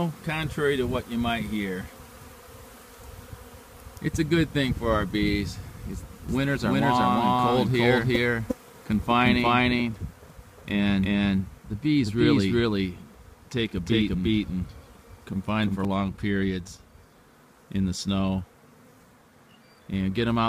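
From 6.29 s to 15.85 s the audio carries a doubled audio track: a second full-band copy trails the original by roughly 400 ms at about the same level, switching in and out abruptly with no decay or room colour. It sounds like everything repeated a fixed step behind. The likely cause is a second, slower capture path mixed in. A spectrogram shows every event repeated as a shifted duplicate, and the waveform thickens with overlapping, evenly offset shapes.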